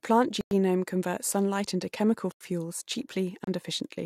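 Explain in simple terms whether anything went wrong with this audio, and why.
The speech cuts out three times: from 0.41 to 0.51 s (about 100 ms), from 2.32 to 2.41 s (85 ms), and from 3.44 to 3.47 s (30 ms). These are blocks of digital silence, where stretches of the sound were replaced by silence with no fade. The middle gap fits one 4096-sample buffer, which suggests the playback program did not refill its output in time.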